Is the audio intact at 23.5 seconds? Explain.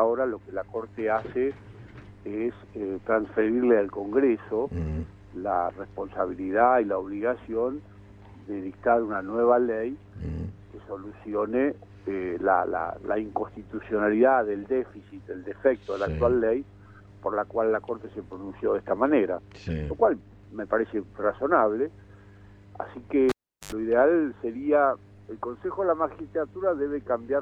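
No. A live cable was pulled and plugged in between 23.29 and 23.72 s: a pop, about 380 ms of near silence, 80 ms of 50 Hz mains buzz, then another pop.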